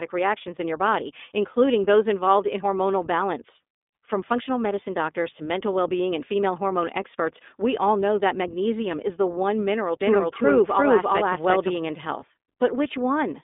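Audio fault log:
Throughout: iLBC codec. The speech has been squeezed through a narrowband VoIP coder at what sounds like around 15.2 kbps, so everything lives between roughly 200 Hz and 3.6 kHz and nothing gets past about 3.7 kHz. Each 20 ms frame is coded on its own, which is why the voice comes across clear but slightly rough and synthetic, with the damage easy to hear. You lose the air and sibilance that sit higher up.
10.01 to 11.77 s: doubled audio track. Right after "is the one mineral", a second copy of the speech comes in at about the same level, trailing by roughly 400 ms, and it drops out abruptly just before "and health". There's no decay or room colour on it. It's a clean full-band duplicate, so this is likely a second capture path or an edit that left two copies out of step.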